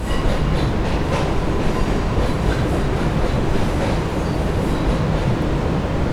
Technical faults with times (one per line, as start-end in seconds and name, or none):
none